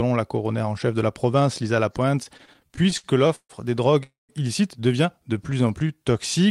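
It's a speech recording with three network-playback faults in a row. From 2.23 to 3.52 s there are repeated stalls (stutter): the sound keeps catching and dragging in twelve small gaps, the longest about 141 ms, with roughly 359 ms of filler adding up to about 28% of that stretch. It settles just before "des drogues illicites devient". That's the jitter buffer running dry over and over and the receiver stretching the last bit of sound each time, so nothing's actually lost. Next, between "des drogues" and "illicites devient", from 4.03 to 4.32 s, you get a call audio freeze: the last sound hangs as a fading buzz and then drops into about 160 ms of silence, with roughly 254 ms added in total before the speech picks up exactly where it stopped. The likely cause is packets held up in transit until the buffer emptied, leaving a gap inserted into the audio with nothing missing. Finally, just after "des drogues illicites devient", from 5.23 to 6.13 s, there's a jitter buffer slow-down. 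The speech runs at about 88% speed with the pitch unchanged and sounds drawn out, adding about 114 ms. That's the receiver repeating single pitch periods and bits of pause to rebuild its reserve.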